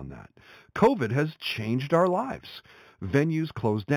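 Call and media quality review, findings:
Imaging from linear upsampling, throughout: dull top, metallic shimmer on sibilants from 4–8 kHz mirror images about 25 dB down. Fits 8 kHz speech line-interpolated to 44.1 kHz.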